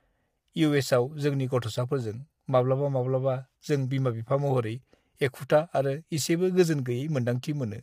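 Speech runs through the whole clip with plainly audible low-delay AAC compression damage: the voice sounds rough and grainy, with a hiss-like fizz between harmonics and a dulled, artificial top end. The cause is likely AAC-ELD coding at a rate that fits about 32 kbps, whose short frames resolve pitch poorly. On a spectrogram the harmonic stripes look smeared and noise fills the gaps between them, while the upper band appears thinned or patchy.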